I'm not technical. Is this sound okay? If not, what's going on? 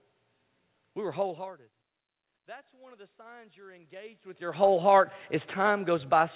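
No. From about 2.3 to 4.5 seconds you can hear automatic gain rising. The sound coming in had dropped a lot, so the system slowly turned its volume up to compensate. Over those two seconds the voice swells back up, and the room noise behind it swells with it. The talker also shifts position around 1 and 4 seconds, which changes the loudness, but that is just movement.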